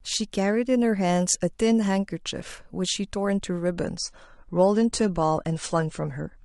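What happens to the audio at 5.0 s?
Just before 5.0 s, at 4.95 s, there is a brief stutter from overlapping chunks: the audio was handled in 2.5 s pieces, and the next piece began about 13 ms early, so that sliver plays twice. Unlike a dropout, nothing goes missing; the tick is a repeat, not a gap.

The moment also lies inside a stretch where the adaptive stream dropped to a lower bitrate, from 3.75 s to the end. Nothing above about 9.9 kHz remains, and the sound turns dull, consistent with AAC falling from roughly 96 to 32 kbit/s. Unlike a stall, the switch is sudden but seamless.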